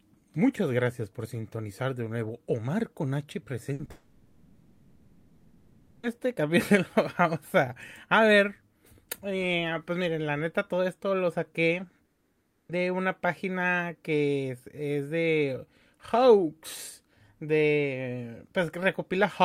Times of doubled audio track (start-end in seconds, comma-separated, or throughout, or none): none